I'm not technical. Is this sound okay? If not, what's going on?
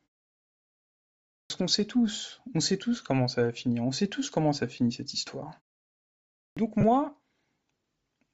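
No. The speech was likely squeezed through Bluetooth LC3 compression, which strips fine detail, so the voice sounds grainy and breathy all the way through.

There are two cases of clipped start after a pause. After silence, the playback device needs a moment to wake up, so about a tenth of a second is swallowed at 1.4 s and again at 6.47 s, and speech begins abruptly.

At 6.81 to 6.84 s, lost LE Audio frames cause a brief dropout of about 22 milliseconds. The receiver patches that gap with a short noisy smear instead of the real sound.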